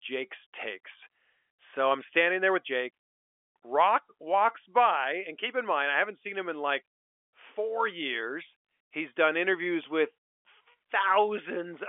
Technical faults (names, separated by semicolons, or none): none